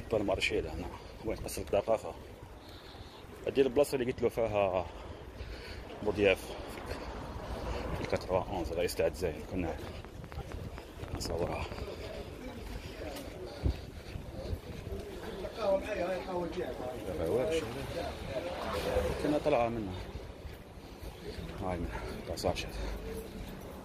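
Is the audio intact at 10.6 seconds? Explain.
No. From 9.87 to 11.80 s, likely interference or a faulty connection injects a train of clicks: around fifteen similar pulses at an uneven pace, near 7.85 per second, peaking roughly 10 dB above the sound and heard as ticking over it.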